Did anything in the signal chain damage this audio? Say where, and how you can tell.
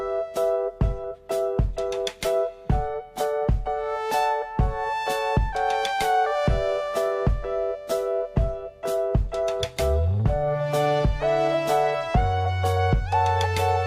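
No, nothing in the chain audibly damaged this audio; there's no point at any stage where the signal breaks, distorts or drops out.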